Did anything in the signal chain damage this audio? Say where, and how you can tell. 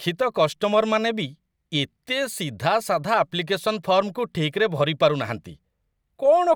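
No, nothing in the signal chain damaged this speech.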